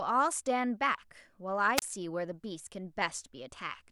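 A speech recording with a wireless microphone squelch dropout between 1.76 and 1.82 s. The analogue FM radio link weakens, a short burst of hiss rises, and the receiver's squelch shuts the output for about 29 ms before the speech comes back. On a waveform this shows as a brief fuzz of noise followed by a nearly flat line. A spectrogram shows a broadband noise smear, then an empty vertical gap, then the speech harmonics resuming.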